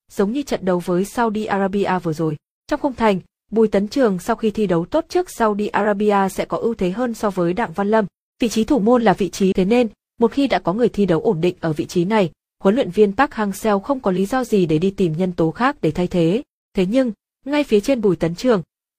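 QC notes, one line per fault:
9.48 to 9.53 s, stream segment skipped. The sound jumps abruptly forward, with a small blip lasting about 50 ms at the join. A segment of the stream likely failed to load. The player then continued straight from the next one.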